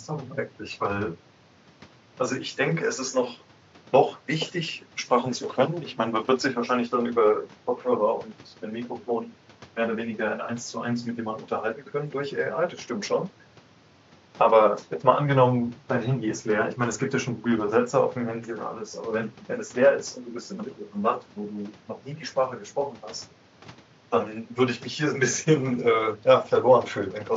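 No technical faults can be heard anywhere in this speech recording. A low background of room noise sits about 28 dB below the speech, picked up by the microphone along with the talker.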